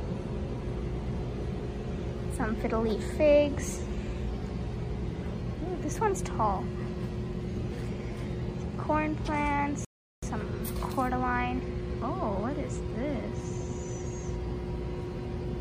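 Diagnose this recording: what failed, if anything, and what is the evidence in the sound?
Playback stage: a rebuffering stall at 9.85 s cuts to silence for about 0.38 s, then the sound resumes exactly where it stopped, adding time without losing any.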